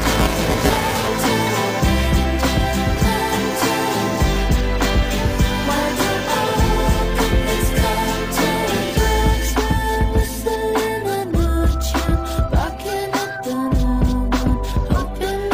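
Buffer tearing affects the opening of the audio, from 0.0 to 1.08 s, as a rattling, robotic buzz at 345 Hz that sounds only while signal is present. The writing side and the playback side of a ring buffer have drifted into each other, so each short period mixes fresh audio with a large share left over from one lap earlier, a few milliseconds stale. The hard joins repeat at the buffer rate, which fits a 128-sample buffer.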